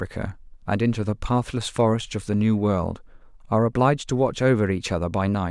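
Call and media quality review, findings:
No audible faults found in this speech clip; no action required.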